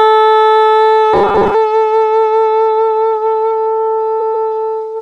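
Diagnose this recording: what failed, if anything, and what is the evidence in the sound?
From 1.14 to 1.55 s the sound turns into a rigid, metallic buzz fixed at 200 Hz, the robotic sound from repeated short buffers. This points to the driver or buffer stage: the likely cause is audio arriving too seldom, so the playback path fills the gaps by looping the last chunk of roughly 5 ms, which fits a 200 Hz repeat rate. About half of the audio in that span is replaced by these repeats rather than the real signal.

From 4.20 to 4.48 s a block of 139.3 ms plays twice more than it should, a stutter. These are repeated frames, a fault at the codec or storage stage: a run of compressed frames, which fits about six frames, was written or sent again, and the decoder faithfully played each copy. The repeats lengthen the clip by 278.6 ms.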